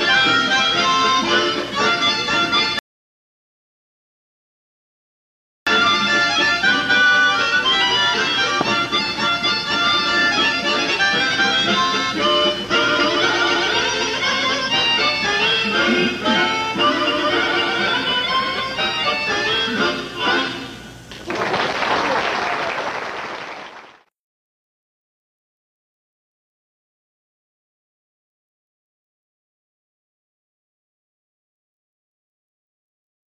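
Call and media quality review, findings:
Sound cuts to silence at 2.79 s, resumes at 5.67 s exactly where it left off, nothing missing. Rebuffering stall: player buffer ran dry, playback paused until more data downloaded. Adds 2.88 s of dead air; client buffering or network delivery.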